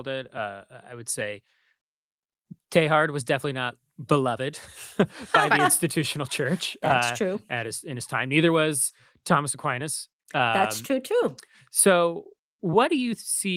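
No technical faults are audible in this recording.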